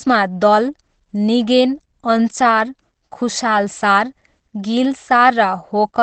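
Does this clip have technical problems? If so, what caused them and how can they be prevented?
Yes. Throughout the speech the sound is muffled and hoarse, with nothing above 8.4 kHz. This is likely Opus compression in its speech (SILK) mode at wideband. When bits are very scarce, the encoder drops the upper band and models the voice coarsely, trading detail for intelligibility. The heavy damage fits a very low bitrate, around 12 kbps. To prevent it, encode at a higher bitrate so Opus keeps fullband audio and finer spectral detail.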